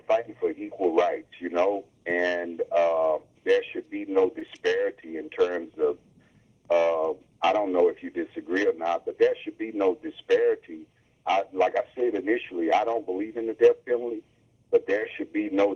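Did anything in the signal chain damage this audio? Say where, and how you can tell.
Yes, at the network stage: there's a short concealed packet loss around 4.39 to 4.43 s, a brief smear where about 20 ms of audio never arrived in time and the receiver papered over it by extending the preceding sound before blending back into the real signal.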